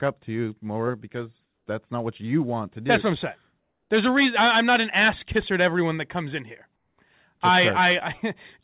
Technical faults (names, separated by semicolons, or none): comfort noise in place of the background